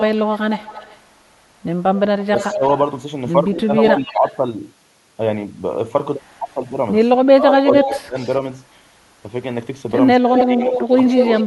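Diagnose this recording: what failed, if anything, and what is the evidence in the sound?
Echo leak: the far end's echo canceller likely failed to remove what its microphone heard from its loudspeaker, a call-processing fault. A copy of the speech returns 220 to 236 ms late at 0.0–1.01, 2.21–4.37, 6.51–8.36 and 10.34–11.44 s. It rises from about 15 dB below the speech to roughly equal level.

Speech suppressed in double talk: call processing likely mistook overlapping talk for echo and turned the talker down. Where the echo overlaps, the speech dips at 2.22–2.62, 3.57–4.34, 7.32–8.16 and 10.18–11.44 s. The deepest drop is about 20 dB, and the last stretch sinks about 10 dB.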